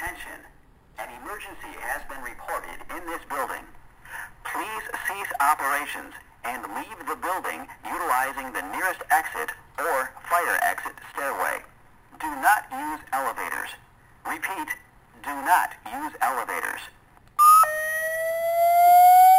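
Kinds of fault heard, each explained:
Imaging from sample-and-hold upsampling: unsmoothed repeated samples, fitting a 12 kHz source rate, mirror content into 6–12 kHz at about -17 dB, a metallic fizz; spectrograms show a flipped band.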